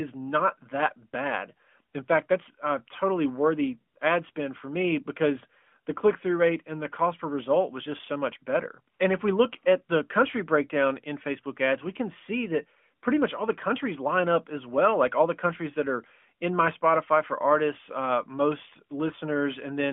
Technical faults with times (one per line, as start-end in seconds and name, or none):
3.94-3.96 AMR comfort noise
4.32-4.36 AMR comfort noise
8.96-9.00 AMR comfort noise